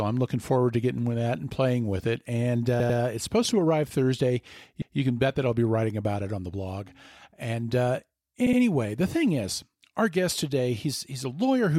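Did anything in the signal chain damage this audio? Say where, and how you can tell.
Yes. The speech stutters three times, a short stretch playing again. At 2.80 to 2.99 s, a 96 ms block repeats twice before "it's supposed to arrive". At 4.8 to 4.98 s, 160 ms plays once more before "can bet that I'll". At 8.46 to 8.59 s, 64 ms repeats twice before "the thing is our". These are repeated frames at the codec or storage stage. Compressed frames were written or delivered more than once, adding about half a second.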